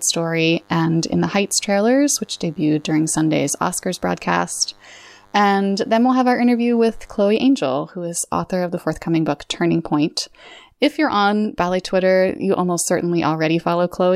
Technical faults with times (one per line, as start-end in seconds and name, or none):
0.00-7.24 DECT cordless phone buzz